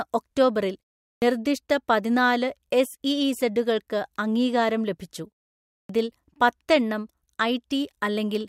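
At 1.14 s and again at 5.81 s, speech resumes with its first sounds missing, so the onset snaps in abruptly out of silence. This is a clipped start after a pause: during the preceding gaps of 0.39 s and 0.56 s the output device dropped into sleep, and it needed about 80 ms and 84 ms respectively to wake and lock again, swallowing that opening stretch, while the silent pauses themselves stay quiet as expected.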